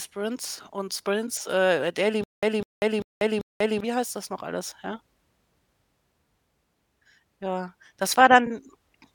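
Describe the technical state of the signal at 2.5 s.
Stutter with silent gaps, 2.24–3.80 s: a 200 ms fragment, likely replayed by a stalled stream, repeats four times as identical waveform blocks between flat 192 ms gaps.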